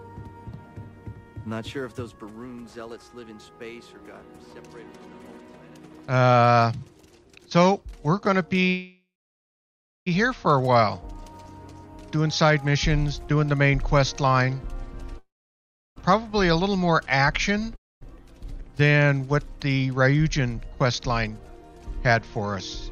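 From 8.69 s to 10.08 s the audio stops and the last sound trails off as a fading buzz, then about a second of silence, before carrying on exactly where it left off. This is a call audio freeze, likely from packets stalling and draining the jitter buffer, leaving a 1.37 s gap with nothing lost.

At 15.18 s a similar fade and roughly 0.7 s of silence run to 15.98 s, but the audio resumes further along, with about 840 ms of material gone. That is a long network dropout, likely caused by packets that never arrived.

A shorter call audio freeze at 17.76 s to 18.03 s inserts a brief fading gap of about a quarter second, mostly silent, again likely from delayed packets, with nothing missing afterwards.

From 19.93 s to 22.21 s the audio sounds hurried while its pitch stays put, running at 108% speed. This jitter buffer speed-up comes from the receiver trimming short pitch-period slices to shed excess buffered delay, about 200 ms in all.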